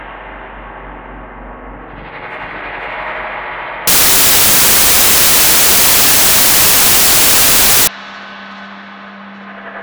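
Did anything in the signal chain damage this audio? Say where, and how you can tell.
Yes, at the sample-format conversion stage. From 3.87 to 7.87 s the sound turns into loud, harsh broadband noise. That's samples built from the wrong bytes: a byte-order or alignment slip pushes the busy low bits into each sample's top end.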